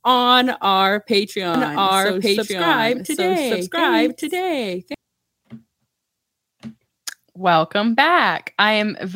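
From 1.54 s, just after "on our", the speech turns into a doubled audio track. A second copy of the same speech runs about a second behind the first. It is about as loud as the original. It is full-band, with no decay or room colour. It cuts in abruptly and stops abruptly at 4.94 s. The likely cause is a second capture through a slower path.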